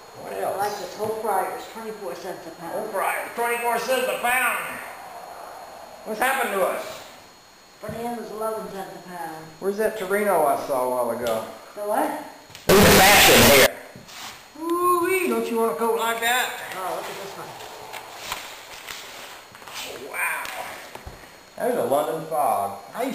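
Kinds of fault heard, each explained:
Float read as integer: 32-bit float samples were likely read as 32-bit integers, so 12.69–13.66 s becomes loud, harsh, nearly square noise.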